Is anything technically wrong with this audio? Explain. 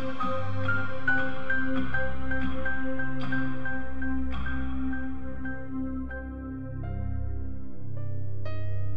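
No, nothing technically wrong stood out on listening to this music.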